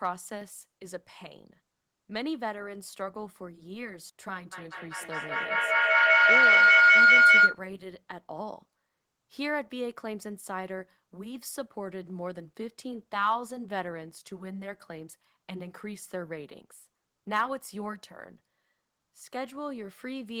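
A speech clip with a feedback howl from 4.52 to 7.66 s: two devices in one room are on the same call, so each pass through mic and speaker adds level. It narrows to a tone around 1.5 kHz, pulsing roughly every fifth of a second, peaking about 16 dB above the speech.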